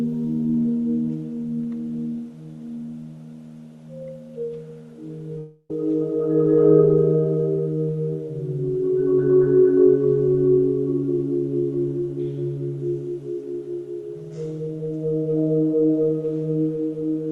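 From 5.38 to 5.71 s the sound breaks off and is replaced by a buzzy continuation of the last moment that fades, with about 30 ms of silence at the very end, before it resumes with roughly 0.31 s missing. This is likely a long network dropout, with the receiver concealing the gap. On a spectrogram, smeared, repetitive bands fade to a short blank column. The waveform shows a decaying envelope, a brief flat stretch, then an abrupt restart, all within the 12 kHz band of the Opus call path.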